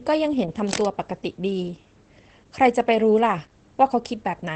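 From start to finish the speech carries Opus voice compression damage. Nothing is present above about 8.4 kHz, which fits the wideband setting where the SILK linear-prediction coder handles the signal alone. The excitation is coded coarsely, as it would be at a low bitrate around 12 kbps, so the codec damage is plainly audible. Sibilants lack air, and the speech comes across muffled and somewhat hoarse, with a faint robotic edge.

Between 0.67 and 0.86 s a burst of cable scratch noise cuts in over the speech, a little below the speech level. It sounds like dense, irregular crackling and rustling that lasts about a fifth of a second and then stops. This is likely a worn cable, connector or control being moved, so that its contact resistance jumps around rapidly and injects uneven noise into the signal for that moment.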